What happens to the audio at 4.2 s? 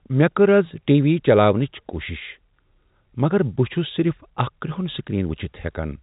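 Nothing goes wrong at 4.2 s; the speech there carries on intact, with only the narrow telephone band of G.711 coding, nothing above about 3.8 kHz, that runs through the whole clip.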